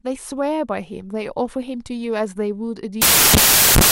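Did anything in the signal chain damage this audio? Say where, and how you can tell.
Yes. From 3.02 s to the end at 3.91 s, samples built from the wrong bytes turn the speech into loud noise at the sample-format conversion stage. Unlike a noise burst or clipping, the noise is harsh and broadband, since scrambled low bits dominate every value.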